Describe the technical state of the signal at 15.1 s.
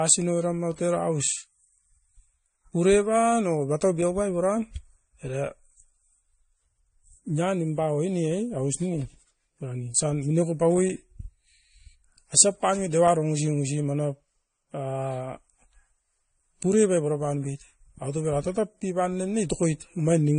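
At 15.1 s the speech carries transcoding between lossy codecs, present throughout: nothing above about 9.7 kHz, with the artefacts of each codec layered together, the later one adding its own on top of the earlier ones. The two different artefact types heard together point to a likely MP3-to-AAC chain, unlike a single codec pass.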